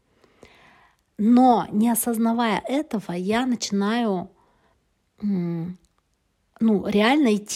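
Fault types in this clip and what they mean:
No technical faults can be heard anywhere in this speech recording. Nothing in the audio calls for a fault description.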